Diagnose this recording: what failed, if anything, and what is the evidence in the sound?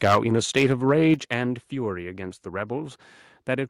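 The sound turns harsh and crackly from 0.03 to 0.18 s, with peaks about 9 dB past full scale and around a tenth of samples flattened. It happens again from 0.57 to 1.14 s, about 4 dB over, with far fewer samples flattened. This is likely microphone overload at the converter, which squares off the peak tops.

The level drops abruptly by about 3 dB at 0.15 s and by about 7 dB at 1.14 s. The first drop lands near the end of a distorted stretch, the second right at the end of one. The likely cause is call processing: the microphone volume stepped down in response to the clipping.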